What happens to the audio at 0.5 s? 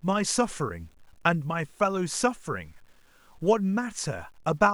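At 0.5 s the speech carries grainy, signal-following distortion that runs through the whole clip, likely low bit depth without dither: samples rounded to roughly 9 bits, leaving error about 40 dB below the speech. On a waveform, quiet stretches show visible stair-steps; a spectrogram shows broadband grit that vanishes in silences.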